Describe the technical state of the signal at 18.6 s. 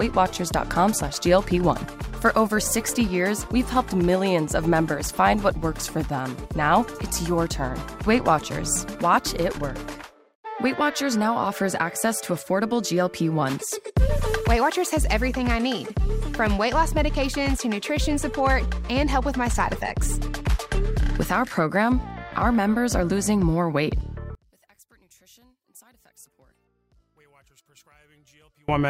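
At 18.6 s the signal is intact, with no audible dropout, distortion, glitch or other technical fault at that moment.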